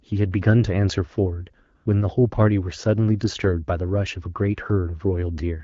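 From 1.75 to 1.85 s, for about 100 ms, AMR comfort noise replaces the real background. The phone treated that moment as silence and sent no speech frames, so the receiver generated a smooth, steady hiss from a rough summary of the background's level and spectrum. Unlike a dropout, the gap is not dead silence. Unlike packet-loss concealment, nothing of the preceding sound is stretched or repeated. The texture simply goes uniform, then switches back. Around it, the AMR-WB coding sounds clear with only light damage, which fits a rate of about 12.65 kbit/s.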